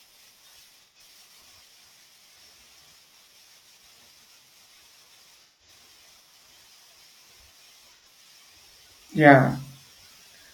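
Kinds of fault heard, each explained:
AAC frame loss with concealment: Compressed audio frames went missing in transmission. The decoder filled each gap by rebuilding sound from the last good spectrum. This clip has three brief smeared, phasey patches in the speech, at 0.82 s, 5.43 s and 7.94 s, each lasting 85 to 171 ms.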